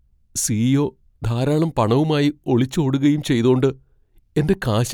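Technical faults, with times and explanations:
No technical faults can be heard anywhere in this speech.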